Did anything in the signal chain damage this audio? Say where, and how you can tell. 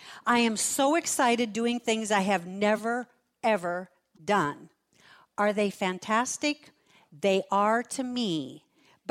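Yes. At the codec stage, a corrupt frame was decoded at 2.76–2.79 s and 4.15–4.20 s. Flipped bits misplaced energy into brief glitches, which show as short, stray smudges on a spectrogram.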